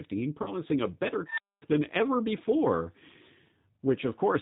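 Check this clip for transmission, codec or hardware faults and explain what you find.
Three faults are audible: codec coloration across the whole clip, a concealed packet loss near the start, and an unstable filter burst shortly after.

The G.729 codec (the G.729A variant at 8 kbit/s) shapes the entire recording. It rebuilds speech from a vocal-tract filter, a pitch predictor and a few coded pulses per 10 ms frame rather than sending the waveform itself. Nothing above 4 kHz survives. The damage is plainly audible as a rough, slightly synthetic, band-limited quality throughout.

Between 0.42 and 0.54 s there is VoIP packet loss concealed by the speech codec. About 40 ms of audio went missing, which fits two lost packets. The decoder filled the gap by repeating its last pitch and filter settings at falling gain. This is heard as a brief buzzy or noisy, smeared stretch. The sound stays weak for a short while after real packets resume, because each decoded frame depends on the previous one.

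From 1.03 to 1.62 s an unstable filter takes over, ending just before "than ever before". A recursive filter received bad coefficients and its output grew without bound. A tone around 5 kHz swells over roughly 0.34 s into a loud, clipped squeal. The arithmetic then overflows and the output drops to silence for about 240 ms until the filter resets.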